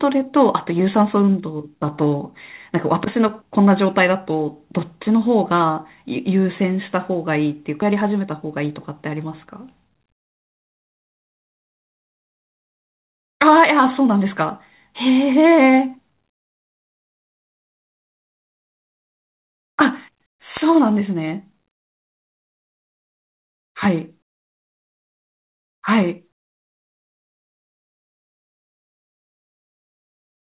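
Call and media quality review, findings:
Skip ahead at 7.82 s: playback jumps forward with no fill, and about 0.7 s of speech is missing. The two sides are joined almost directly. This points to the jitter buffer discarding queued audio on overflow, cutting latency by the same amount.

Jitter buffer speed-up from 7.92 s to 14.1 s: speech runs about 6% fast at unchanged pitch and sounds hurried. The receiver is shortening the buffer by repeatedly removing pitch-period-length pieces, about 0.4 s in total. Band-limited to 4 kHz, consistent with G.711 mu-law.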